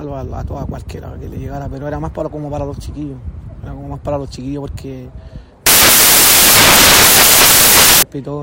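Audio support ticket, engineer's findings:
Samples built from the wrong bytes, 5.66 to 8.03 s: sound drops into loud hiss. Probably the decoder or file reader. Byte order or alignment slipped, so the jittery low bits end up running the show.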